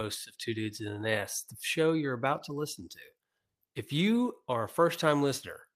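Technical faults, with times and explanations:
No technical faults detected on listening; the speech signal shows nothing to log.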